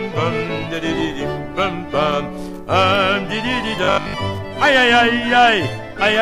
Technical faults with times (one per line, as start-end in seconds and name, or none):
3.84-4.14 robotic sound from repeated short buffers